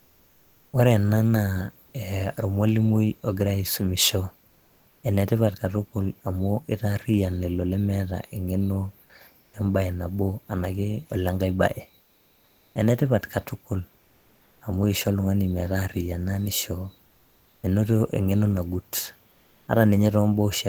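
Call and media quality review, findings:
Comfort noise in place of the background: 0.00–0.67, 4.47–5.03, 9.43–9.51, 12.03–12.75, 14.03–14.59, 17.07–17.63, 19.31–19.67 s. In pauses, the room noise drops about 2–5 dB and turns steady and featureless. Likely Opus DTX: sender stops transmitting, receiver synthesises noise until speech resumes.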